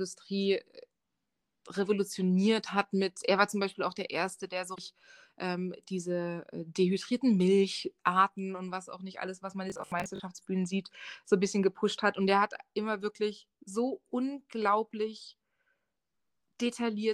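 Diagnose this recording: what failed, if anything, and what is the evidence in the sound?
Damaged data in the compressed stream is the first failure, at the codec or storage stage. Between 4.72 and 4.79 s, right after "der so", the decoder hits corrupted frames it cannot read, loses sync and has to hunt for the next valid frame header. The result is a short glitch lasting about 70 ms. Speech picks up again at "ähm diese äh dehydrierten".

Robotic sound from repeated short buffers follows from 9.70 to 10.20 s, between "nicht alles was man" and "sieht so ein bisschen". This likely comes from the driver or buffer stage, where fresh audio arrived too slowly and the playback side refilled the gap by looping its last block. The speech turns into a rigid 50 Hz metallic buzz that still roughly tracks the syllables. That rate fits a 20 ms block being repeated, and around two fifths of that half-second appears to be replayed material.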